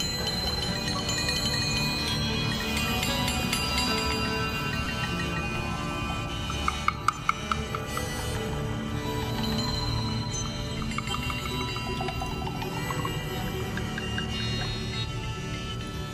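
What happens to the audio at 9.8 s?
Nothing goes wrong at 9.8 s; the audio plays through that moment intact, with no dropout, click or distortion.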